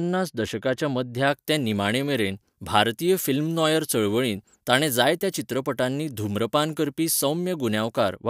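It's a speech clip with pre-emphasis left on from about 1.27 s to 8.16 s. The treble is about 14 dB hot at 10 kHz, which fits an FM-style 75 µs boost never undone by de-emphasis, so it turns thin, bright and sibilant.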